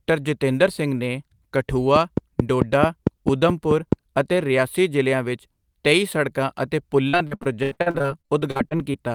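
From 1.96 to 3.94 s, a train of clicks runs over the speech. About ten sharp pulses arrive evenly, roughly 4.6 per second, and peak around 20 dB above the speech. The likely cause is nearby interference or a faulty connection.

From 7.09 to 9.09 s, repeated packet loss makes the speech choppy and robotic. About twenty holes appear, the longest 82 ms. Each is patched by repeating the preceding sound, so about a third of the stretch is filled in.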